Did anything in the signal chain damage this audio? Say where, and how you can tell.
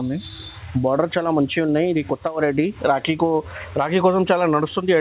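No, nothing in the chain damaged it: the band stops at 4 kHz, as expected from a narrowband call path such as G.711 A-law, and that is normal behaviour for that stage, not a fault.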